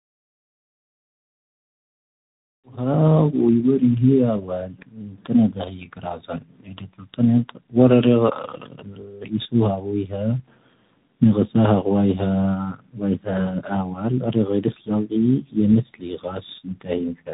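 A speech recording passed through tandem speech coding, G.729A at 8 kbit/s, then G.711, then G.726 at 32 kbit/s. Its two speech codecs compound each other's damage, leaving a rough, muffled, warbly sound with nothing above 3.8 kHz, under a smooth fade-in that reaches full level at 3.19 s.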